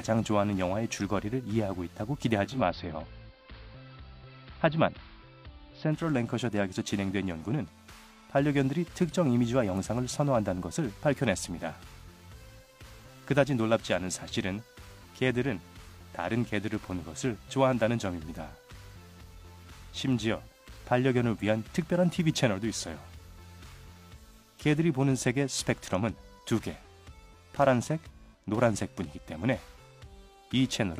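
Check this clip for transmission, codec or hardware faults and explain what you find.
One fault. From 2.42 to 6.09 s, digital radio blending to analogue: the receiver lost digital and cross-faded over 229 ms to AM, adding faint hiss and shifting level about 1 dB.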